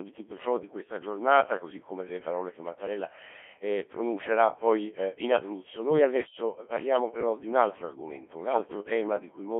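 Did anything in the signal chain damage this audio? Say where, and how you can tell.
Yes, at the codec. The speech sounds robotic and buzzy throughout, within a 250 Hz to 3.4 kHz band. This is heavy Codec 2 vocoder damage, consistent with about 1.3 kbit/s sine-wave resynthesis.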